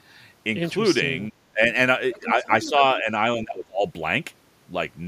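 From 1.28 to 1.62 s the speech dips sharply, by about 25 dB at its deepest. It sags again from 2.19 to 2.47 s and from 2.69 to 3.09 s, more gently, then drops about 20 dB from 3.37 to 3.83 s. This is speech suppressed in double talk, likely an echo canceller turning everything down while both sides spoke at once. Between 2.13 and 2.69 s a faint second voice, about 15 dB below the speech, comes through. This is the other side's voice leaking through, likely loudspeaker echo the canceller failed to remove.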